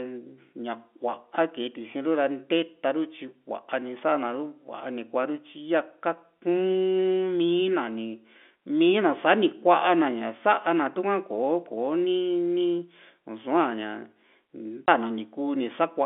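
Packet loss filled with silence occurs at 14.87 s: a single gap of about 20 ms, which fits one lost packet. The receiver had nothing to play for that slot and inserted silence, so the speech drops out abruptly with hard edges. Around it, the G.711 telephone band is intact.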